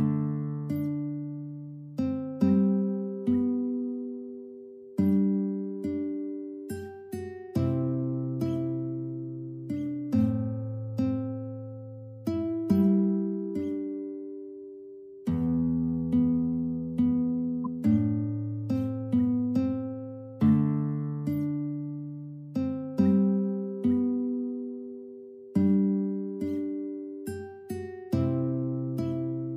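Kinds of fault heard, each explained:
Corrupt frame decoded: damaged compressed data played anyway, misplacing spectral energy into a brief squeak or noise burst near 17.6 s, spanning roughly two frames.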